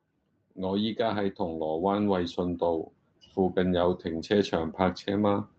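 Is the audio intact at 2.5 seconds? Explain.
No. Automatic gain rising is under way at 2.5 s, in the middle of a slow climb from 0.4 s to 5.48 s. The automatic gain control judged the input too quiet and kept raising its gain step by step, about 8 dB in total. The speech and the background noise swell together, so the noise floor creeps up with the voice. The top of the audio stops near 8 kHz, which fits a low-bitrate call codec.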